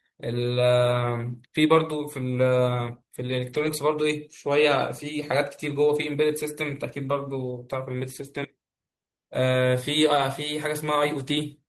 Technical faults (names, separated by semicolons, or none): lost packet rebuilt from error correction